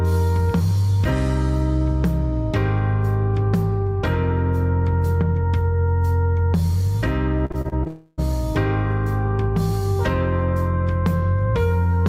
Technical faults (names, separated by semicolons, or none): repeated packet loss (robotic sound); long network dropout